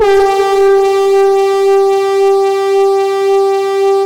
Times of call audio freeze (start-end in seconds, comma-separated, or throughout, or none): none